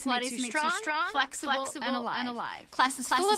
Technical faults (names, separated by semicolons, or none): doubled audio track; call bitrate drop